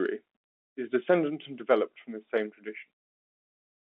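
No faults can be heard in this speech.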